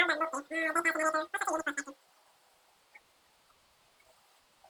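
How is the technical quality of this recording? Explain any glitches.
Wrong sample rate, throughout the clip: the speech runs about 2.76 times too fast and sits roughly 17.6 semitones high, nearly an octave and a half. Speed and pitch shift together by the same ratio, which fits audio captured at 16 kHz being played back at 44.1 kHz with no rate conversion. Every sample arrives early, so the speech sounds squeaky, chipmunk-like and rushed, with syllables crowded together.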